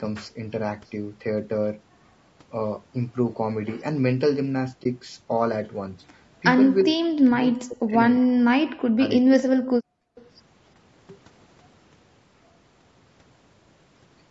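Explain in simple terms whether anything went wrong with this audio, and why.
Low-delay AAC compression runs through the whole clip. The speech sounds rough and grainy, with a hiss caught between the tones of the voice and a thin, artificial edge at the top. The likely cause is AAC-ELD, the low-delay codec used in video calls. It cuts sound into very short slices to keep the lag small, and at a low bitrate there are too few bits to draw the voice cleanly, so detail gets smeared into noise.

AAC frame loss with muting happens at 4.83 to 4.86 s. For a split second the sound softly drops to nothing and comes back. One chunk of the coded audio went missing, and the decoder filled it with silence. Because neighbouring chunks overlap and blend, the gap fades out and in rather than snapping, so it is a quiet hole.

Speech suppressed in double talk affects three stretches: 6.83 to 7.05 s, 7.26 to 8.0 s, and the longest, 8.18 to 9.72 s. 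The voice sinks deeply, almost vanishing in places, then recovers. This likely happened because both people spoke at once. The echo canceller, which stops the loudspeaker's sound from being sent back, couldn't tell the talker from the echo and turned everything down together.

Background gated by the echo canceller comes at 10.0 to 10.16 s. The room sound ducks sharply for a moment, then returns. While the far side's audio was playing through the loudspeaker, the canceller clamped the microphone down hard to block any echo. The quiet background went with it until the canceller released its grip.

Echo leak follows right away, at 10.16 to 10.26 s. It is a brief, faint scrap of voice trailing about 345 ms behind the original. It is likely a bit of loudspeaker sound that slipped past the echo canceller. The microphone picked it up and sent it back, so a delayed ghost of speech is heard for an instant.

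Nothing above 8 kHz comes through, and the lowest bass is trimmed. That is normal call microphone processing, not a fault.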